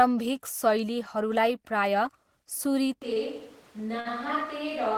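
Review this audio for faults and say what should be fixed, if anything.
At 3.02 s, just after "प्रायः सुरी", the speech turns roomy and hollow, loses bass and drops by about 5 dB. Background noise sits about 25 dB below the speech. This lasts to the end of the clip. It sounds like a switch to a distant microphone, likely because the close microphone's signal failed. Keep the close microphone's feed monitored and its connection secure, so the backup is never used.

Two short stalls from late packets follow. At 3.13 s a sound is held for 27 ms. At 4.00 s one is held for 51 ms. Each time a packet arrived late and the jitter buffer ran dry. The receiver stretched the last sound and then carried on, so nothing is lost, but the sound hangs with a slight buzz or dip. Give the jitter buffer more headroom to prevent it.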